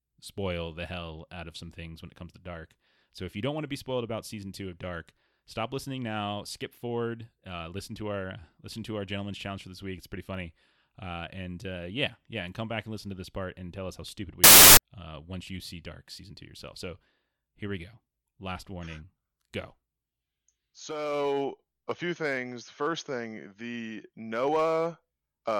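Right after "tell us how stupid", at 14.44 s, the speech gives way to a burst of loud, harsh broadband noise that lasts until 14.77 s, about a third of a second, and then clears before "uh once you see". That's samples built from the wrong bytes. The reader has paired up the bytes of each sample wrongly, so the jittery low bits end up as the big part of every value. What should be speech turns into loud, harsh noise for that stretch.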